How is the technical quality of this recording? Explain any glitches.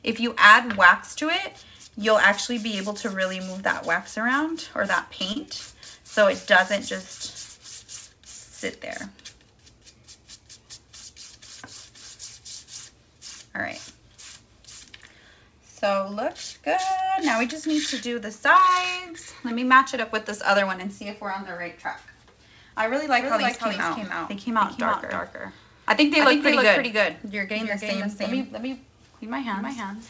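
The recording has two kinds of fault: brief concealed dropouts early on and a doubled track over the last part. The audio carries nothing above 8 kHz, consistent with a wideband call codec such as G.722 at 64 kbps.

Short concealed packet loss occurs at 5.32–5.37 s and again at 6.27–6.29 s. About 30 ms of audio failed to arrive in time in the first case and about 10 ms in the second. The receiver bridged each gap by extending the preceding sound, 34 ms and 10 ms of synthesized fill respectively, then crossfaded back into the real stream. Each event is heard as a momentary smear or wobble.

A doubled audio track runs from 23.21 s to the end. A second, full-band copy of the sound trails the original by roughly a third of a second, a few dB quieter. It has no reverberant tail or room colouring, so it reads as a clean slapback rather than an acoustic echo. The onset at 23.21 s is abrupt. The likely cause is the same signal being captured again through a slower path, or an edit leaving two misaligned copies in the mix.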